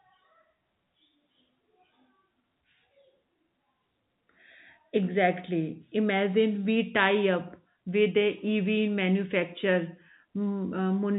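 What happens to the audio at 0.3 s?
Nothing goes wrong at 0.3 s: the speech passes through intact, carried over ordinary G.711 telephone coding, which limits it to the band below about 3.8 kHz.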